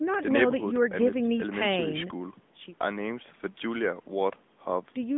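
From start to finish, the speech carries the sound of an AMR narrowband mobile codec. The band is squeezed to roughly 150 Hz to 3.6 kHz, with nothing above 3.7 kHz, so sibilants lose their edge and the voice sounds boxed in and plainly buzzy and synthetic. The damage level fits an upper-rate mode near 10.2 kbps. On a spectrogram the energy stops at a hard ceiling near 3.7 kHz across the whole clip.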